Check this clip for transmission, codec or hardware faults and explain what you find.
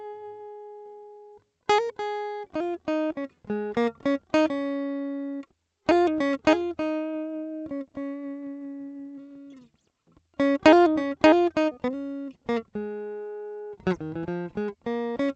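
No transmission, codec or hardware faults can be heard.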